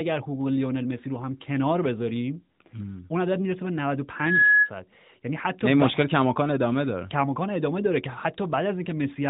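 A piercing whistle swells up in the speech from 4.16 s to 4.70 s, a steady tone at 1.7 kHz that climbs over about a third of a second to roughly 10 dB above the speech. This is a loudspeaker feedback squeal: a microphone picked up its own loudspeaker and the loop ran away at that frequency. The speech was carried through an AMR narrowband mobile codec, so nothing above about 3.8 kHz is present.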